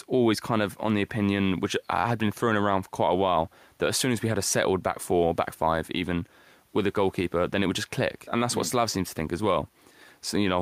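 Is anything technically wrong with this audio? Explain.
No, the speech signal shows no technical faults, and the only background is the room's own ambient noise sitting about 42 dB below the speech, which belongs to the recording space rather than to the system.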